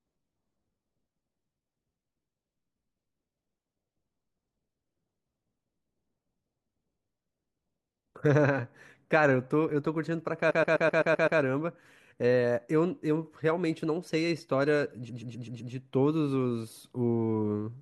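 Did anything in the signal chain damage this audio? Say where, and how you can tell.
Yes. Repeated frames: a 128 ms run of compressed frames was written or sent again and again, so the decoder replays it. The result is a stutter from 10.50 to 11.39 s, adding 0.9 s, and from 15.08 to 15.72 s, adding 0.64 s.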